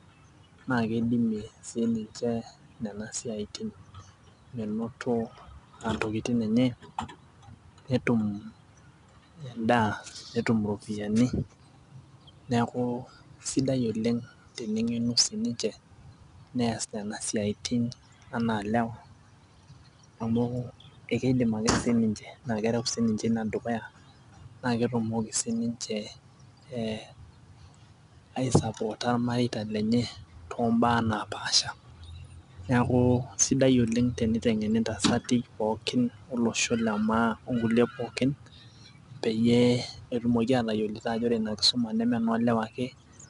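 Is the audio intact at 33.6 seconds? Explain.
No. At 33.6 seconds the speech carries 4-bit ADPCM compression, which runs through the whole clip. Each sample is coded as a coarse 4-bit step from a prediction. This leaves a plainly audible gritty hiss that rises with loud sounds. Nothing sounds above 10.7 kHz, which fits a rate near 88 kbps.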